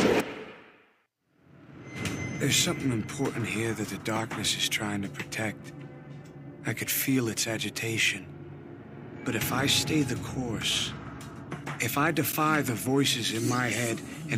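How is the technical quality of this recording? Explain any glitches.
One glitch stands out, a loud pop from 5.44 to 5.47 s. The likely cause is a sudden voltage step or spike entering the signal path, from a plug being moved, a switch, a static discharge or a driver hiccup. The circuitry after that point shapes the spike into a brief pulse, so a single sharp pop lands on top of the recording, peaking a few decibels above the surrounding sound, while the audio continues unbroken underneath.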